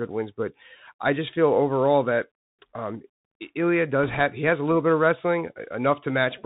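Throughout, the speech carries the sound of the Bluetooth CVSD headset codec. This codec sends one bit per sample to say whether the waveform steps up or down, and the step size adapts. The damage is plainly audible. Nothing passes above 4 kHz, so the speech sounds narrow and boxy. A granular hiss sits under it. Sibilants turn scratchy, and loud high sounds outrun the step and smear. All of this fits a 64 kbps headset link.

From 4.03 to 4.20 s, bit errors on the Bluetooth voice link hit the signal. Flipped bits corrupt the up-or-down decisions, with errors at a rate of a couple of percent. Each bit carries only a small weight, and the codec recovers quickly, so there are no sharp clicks. Instead, a rushing, crackly noise rises over the speech for this short stretch. Then it clears.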